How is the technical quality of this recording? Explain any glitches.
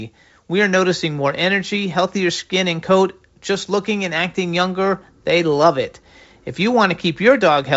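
No glitches can be heard in the recording, which carries speech through G.722 wideband telephone coding at 56 kbit/s, with nothing above 7.8 kHz.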